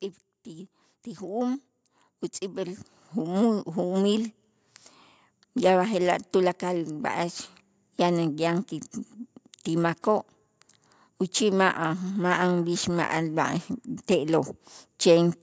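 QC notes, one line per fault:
0.44–1.69 s and 2.39–4.40 s: automatic gain rising. The call's gain control judged the input too quiet and ramped its gain upward, by about 4 dB over 1.25 s and then by about 8 dB over 2 s. Because the whole signal is scaled, speech and room background swell together. The second ramp is longer and larger. The call's microphone processing band-limits the audio to 8 kHz.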